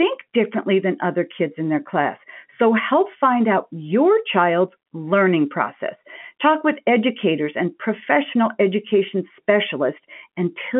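Nothing faulty is audible anywhere in this speech recording.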